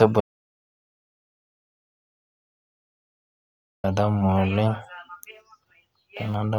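At 0.21 s the input to the recorder was most likely lost, perhaps through a disconnected microphone or a dropped link, while the recorder kept writing silence. This is an audio dropout to silence: the speech cuts off abruptly and the signal falls to silence with no room tone, holding there until 3.84 s, when the speech returns mid-flow. About 3.6 s of what was said in between is simply gone.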